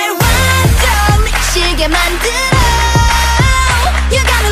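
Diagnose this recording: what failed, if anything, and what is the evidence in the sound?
Three jumps in the sound, at 1.3 s, 2.62 s and 3.85 s, point to the driver or buffer stage, likely a dropped buffer (overrun). Samples got overwritten before being read, so about 40 ms vanishes at the first and roughly 10 ms at the others, joined with no gap.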